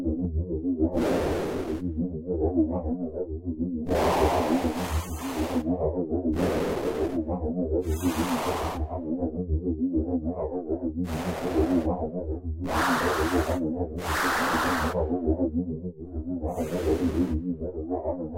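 No technical faults can be heard anywhere in this recording of sounds. There is nothing here that needs a timestamp or an explanation.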